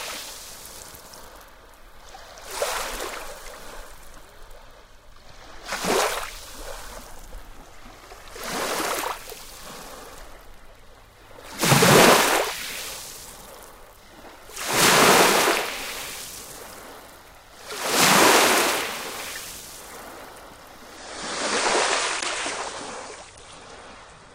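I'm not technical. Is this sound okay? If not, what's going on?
No. From 20.97 s to the end at 24.35 s, the adaptive stream drops to a lower bitrate. The connection slowed, so the player switched to a smaller, more heavily compressed version of the audio. The change is sudden with no gap. The sound loses its top end, with nothing above about 10.1 kHz, so it turns duller and less crisp, and it picks up a watery, processed quality from the heavier compression.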